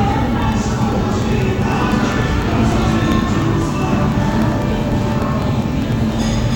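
From 0.12 s to 6.42 s there are periodic USB or driver dropouts. Every 0.1 s something stalls the audio path and roughly a millisecond drops to silence, around seventy times. You hear a steady ten-per-second ticking riding on the sound.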